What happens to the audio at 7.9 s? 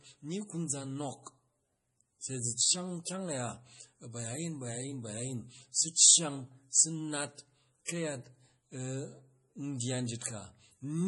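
A burst of pre-echo runs from 7.85 to 7.88 s, a short hiss of about 32 ms that arrives just ahead of a sharp attack. The codec spread its quantisation noise across the whole transform block, so noise meant to be masked by the loud onset leaks into the quiet gap before it. The attack sounds softened and smeared. On a waveform, a thin fuzzy ramp precedes the transient. A spectrogram shows a broadband smear starting before the onset.

Underneath, the whole speech clip carries heavy lossy-codec damage, likely MP3 at a low rate, on the order of 32 kbps. Weak frequency components flicker on and off between frames. This gives a watery, swirly texture with metallic chirps on s sounds. A spectrogram shows speckled, patchy gaps, and the same damage surrounds this moment.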